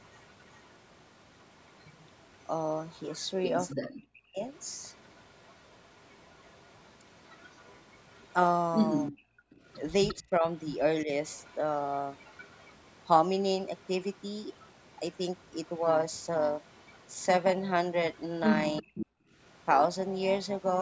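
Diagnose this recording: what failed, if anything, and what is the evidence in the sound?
Echo leak, in the call processing, runs from 0.02 to 12.73 s, 13.82 to 15.7 s, 16.65 to 17.21 s and 18.14 to 19.06 s. A delayed copy trails the speech by 352 ms, about 30 dB down and rising to about 10 dB down in the last stretch. The likely cause is a far-end loudspeaker path that the echo canceller failed to cancel.

Speech suppressed in double talk, also in the call processing, appears at 3.78 to 4.43 s, 9.11 to 11.1 s and 18.81 to 19.02 s. The speech drops out in pieces, by roughly 40 dB at worst. The canceller likely mistook overlapping talk for echo and attenuated both.

Overlap-add ripple, from frame-based processing, runs from 15.82 s to the end. The level rises and falls by about 6 dB at around 300 Hz, which gives a metallic buzz with extra tones around each note. The windowed frames were recombined with an overlap whose gain does not sum flat, so the level pulses once per frame.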